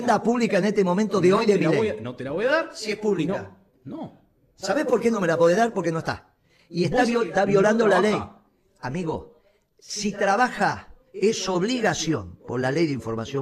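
No audible technical faults are present in this recording.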